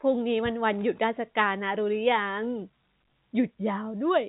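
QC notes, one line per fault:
No fault to log: the speech comes through G.711 telephone coding as expected, with nothing heard above 3.8 kHz.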